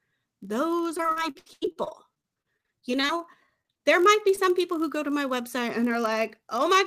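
A block size mismatch (padded) runs through the whole speech clip. One stage delivers blocks that are shorter than the next stage reads, and the remainder is filled with zeros. A tiny silent gap lands in every block. This puts a low buzz under the voice at about 46.9 Hz, which fits a 1024-sample read block. The speed change is very small, with a ratio of 0.999, so timing and pitch sound essentially unchanged.

Repeated packet loss (robotic sound) starts at 0.97 s and lasts until 3.19 s. Audio keeps failing to arrive in time. There are 25 holes, and the longest is 84 ms. Each hole is patched by extending the last sound. About 29% of the stretch is filled this way. The voice turns choppy and robotic, with fragments missing. A second, shorter burst runs from 3.46 to 3.81 s, just before "there might be". It has five holes, the longest 32 ms, and has the same robotic texture.

Short concealed packet loss follows from 4.35 to 4.39 s, between "there might be" and "people who go to". 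About 20 ms of audio never arrived. The receiver bridged the gap by continuing the preceding sound and then blended back into the real signal. It comes across as a brief smear or wobble at the junction.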